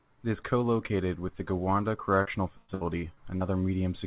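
From 2.22 s to 3.43 s the speech breaks up with repeated packet loss, giving a robotic sound. Six separate holes open within that stretch, the longest about 112 ms, and each is papered over by extending the preceding sound, so roughly a quarter of the span is concealed rather than real audio. The repeated patching produces a choppy texture with fragments dropped, heard against a narrowband call path with nothing above 4 kHz, which points to G.711 coding.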